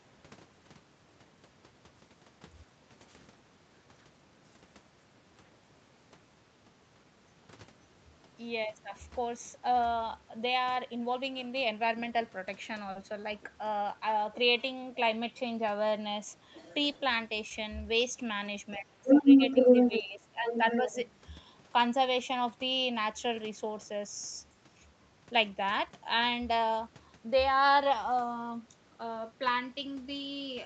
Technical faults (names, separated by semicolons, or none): short stall from a late packet; short concealed packet loss; other side's voice leaking through; speech suppressed in double talk